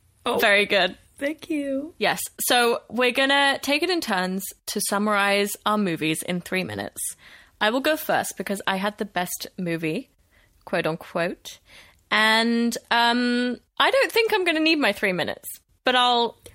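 Nothing in the speech here stands out as a technical fault, so there's nothing to flag at any point in the recording.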